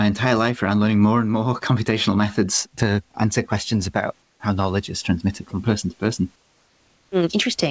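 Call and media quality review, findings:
Comfort noise in place of the background, 4.22–4.40 s, between "to answer questions about" and "knowledge is transmitted from": 180 ms of steady, featureless hiss about 3 dB down, likely DTX on the G.722 call path. Not a dropout: the gap is filled, not silent.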